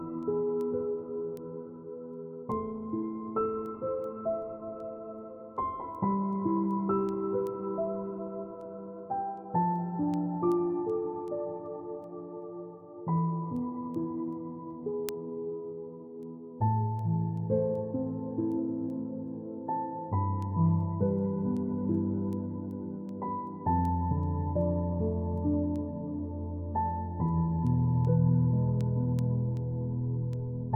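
From 0.23 s to 30.7 s the audio carries word clock ticks: short clicks at a steady rate of about one every 0.4 s, around seventy in all. They come from a digital link read by a device running on its own clock rather than locked to the sender's. The two clocks differ by something like 50 ppm, so they slide past each other repeatedly, and each crossing garbles a few samples and drops or repeats what is consistent with a single sample, producing a tick.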